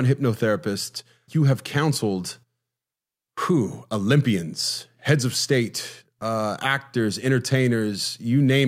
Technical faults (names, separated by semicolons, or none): none